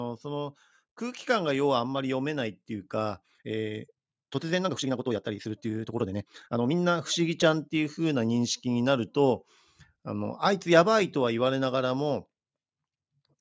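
From 0.21 to 1.61 s, automatic gain rising lifts the level by about 4 dB as the gain control reacts to a quiet input. Speech and background noise swell together, and the waveform envelope widens smoothly across that stretch rather than stepping up.

Between 3.2 and 6.76 s, the pace jumps to about 1.73 times normal while pitch holds steady, likely a time-stretched section squeezed to fit a length by dropping short pieces. It sounds rushed, and on a spectrogram the harmonics keep their spacing, cut off at 8 kHz by the call's microphone processing, while syllables crowd together with small discontinuities at the splice points.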